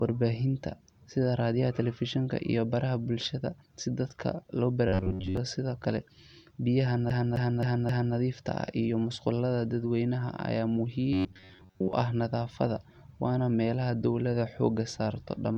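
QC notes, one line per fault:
4.88 to 5.37 s and 11.13 to 11.93 s, robotic sound from repeated short buffers: the likely cause is new audio arriving too slowly, so playback keeps re-sending the last short buffer while fresh material is dropped, most of the time across each span. The repeats impose a fixed buzz near 94 Hz, a period of roughly 10.7 ms, which fits a buffer that short. The speech turns metallic, tracking the words only loosely.
7.10 to 8.16 s, CD stuck on one turn: the player keeps jumping back to the same point, replaying one 0.26 s stretch of speech four times, each return marked by a brief mute at the jump. The result is the quick, evenly timed stutter of a skipping disc, with that same fragment looping before the speech moves on.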